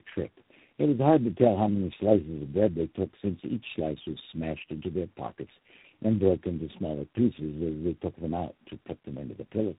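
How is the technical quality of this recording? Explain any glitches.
The technical quality is poor throughout, due to one persistent fault: tandem speech coding.

It is present for the entire clip. The speech sounds like it passed through a chain of telephone speech codecs, probably about four in a row with transcoding stages between them. Each border meant a full decode and re-encode, so every coder worked on material already damaged by the one before, and the losses accumulated. Nothing remains above 3.8 kHz. The speech sounds muffled, rough and warbly, worse than any single codec would make it.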